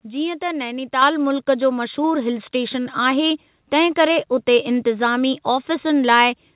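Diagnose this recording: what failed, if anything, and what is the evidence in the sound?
The speech jumps louder twice, with voice and background noise rising together: at 1.02 s by about 6 dB, just before "मुल्कु जो", and at 2.04 s by about 3 dB, right after "मुल्कु जो". This is a microphone volume stepped up at the call-processing stage. The call software judged the input too quiet and raised the device's input volume in single steps, so everything the microphone captured was lifted at once. The band stays limited to below 4 kHz throughout, as expected on this call path.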